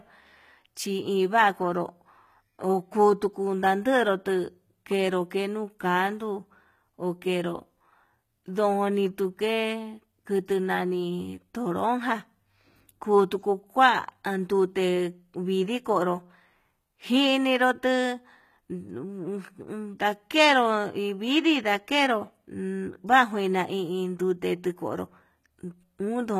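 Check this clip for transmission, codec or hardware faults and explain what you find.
There's one codec problem, running through the whole clip: likely HE-AAC compression, with the damage plainly audible. The treble is rebuilt by copying lower bands upward, so harmonics don't line up and s sounds come out gritty and lispy. Everything stops at 14.9 kHz, which fits a low bitrate around 20 kbps.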